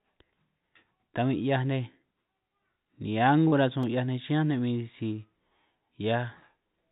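Short concealed packet loss at 3.48 to 3.54 s: about 40 ms of the call arrived too late for the decoder, so the receiver carried the preceding sound forward for roughly 37 ms before rejoining the real signal. It comes across as a brief smear or wobble within the narrowband sound, which has nothing above 4 kHz.

Block of digital silence at 3.83 s: for about 2.7 ms the output dropped straight to silence and then came back, with no fade on either side. That length fits a 128-sample block the program did not fill in time. The abrupt edges make it a sharp tick rather than an audible gap.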